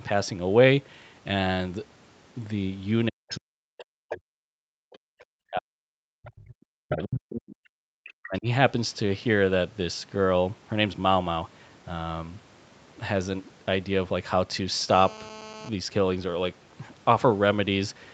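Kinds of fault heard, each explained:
Speech suppressed in double talk: The talker's level collapses in three spans, from 3.08 to 5.95 s, 6.34 to 7.72 s and 8.14 to 8.47 s, with dips reaching about 40 dB and roughly three seconds affected in the first span alone. The pattern is likely an echo canceller that could not tell its own talker from loudspeaker echo while both ends were active, so it attenuated everything and chopped the near-end speech.
Other side's voice leaking through: A second, far-end voice surfaces in short scraps at 3.30 to 3.39 s, 3.78 to 3.84 s, 6.24 to 6.40 s, 7.02 to 7.20 s and 8.06 to 8.12 s. The scraps sit about 15 dB below the main speech at 3.3 and 7.0 s and about 25 dB below at the others. This is likely residual loudspeaker echo that the canceller failed to remove from the microphone path, clustered around the same double-talk spans.
GSM phone buzz: From 14.89 to 15.69 s a hard, raspy buzz appears, about 18 dB below the signal and unrelated to it. 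Its 217 Hz fundamental with a dense harmonic series matches a 2G handset in a call transmitting in bursts at that rate, with the audio circuitry rectifying the radio pulses. It holds steady for its 0.8 s duration, as expected of a call in progress, not a data transfer.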